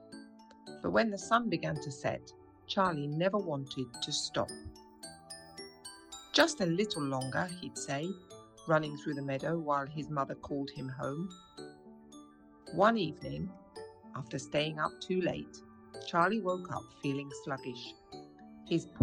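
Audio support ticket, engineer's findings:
Pre-emphasis left on, 3.94 to 8.04 s. Treble boost without the matching de-emphasis, about 14 dB up at 10 kHz relative to 1 kHz, fitting a 75 µs FM curve. Thin, bright, sibilant.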